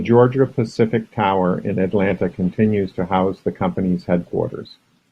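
At 1.86 s the speech suddenly loses quality and stays degraded to the end. This is an adaptive stream at a lower bitrate. The connection slowed, so the player switched versions without a gap. Codec artefacts rise, which fits Opus dropping from 64 to 24 kbit/s.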